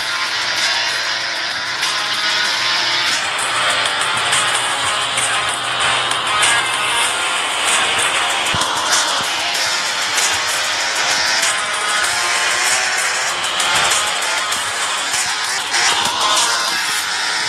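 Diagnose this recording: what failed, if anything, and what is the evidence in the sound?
At 4.53 s, a skip ahead drops roughly 0.4 s of sound and joins both sides almost directly, which points to a network or jitter-buffer discard.

Between 15.92 and 15.95 s, a single loud pop sits roughly 10 dB above the sound, which continues underneath. A likely cause is an analogue voltage transient from wiring or a switch.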